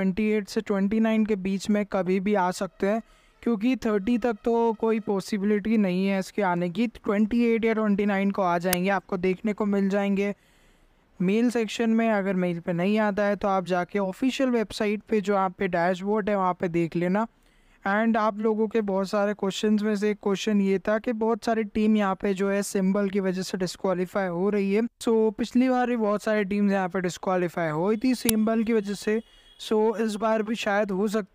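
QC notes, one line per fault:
8.73 s and 28.29 s, uninitialised buffer: a block of about 5 ms was played before any audio was written into it, so leftover memory came out as a loud crack. On a spectrogram each appears as a thin full-height vertical stripe, and on the waveform as an abrupt jagged spike unrelated to the surrounding signal.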